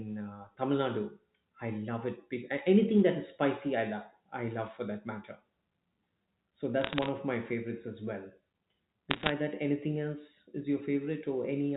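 From 6.81 to 7.09 s and again from 9.11 to 9.29 s, bit errors on a digital phone line crackle over the speech. Flipped bits in the G.711 stream corrupt single samples into sharp ticks, denser in the second burst, where roughly one bit in a hundred is wrong.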